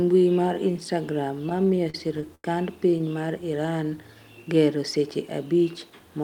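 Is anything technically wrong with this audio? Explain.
Yes, there are two faults. From 1.49 to 2.45 s there are repeated stalls (stutter). Late packets kept draining the jitter buffer. About a dozen held-over gaps, the longest 89 ms, make the speech drag and stammer.

From 3.57 to 3.91 s there is a jitter buffer slow-down. Repeated pitch periods add 45 ms. Speech runs at 89% speed, drawn out but at unchanged pitch.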